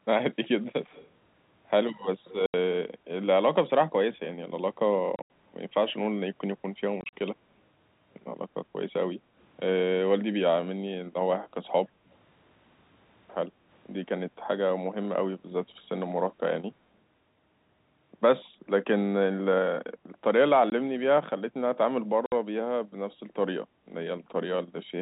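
From 0.84 to 1.1 s, and again from 2.28 to 2.34 s, a faint copy of the speech trails about 104 ms behind. It is an echo leak, likely from a far-end loudspeaker the echo canceller failed to fully cancel.

Packet loss filled with silence starts at 2.46 s with a clean 80 ms hole. The gap fits eight lost 10 ms packets.

More holes follow from 5.16 to 5.3 s, with 110 ms missing in pieces. From 7.01 to 7.13 s, 80 ms is lost in shorter runs.

Background gated by the echo canceller appears from 9.24 to 9.32 s. The room sound dips by about 6 dB, then returns. From 13.49 to 13.68 s it drops about 7 dB for roughly 200 ms.

Silence-filled loss returns at 20.7 s as a brief 20 ms gap. At 22.26 to 22.32 s, there is a 60 ms hole.

The G.711 telephone coding caps the band at 4 kHz, with little or no coding damage.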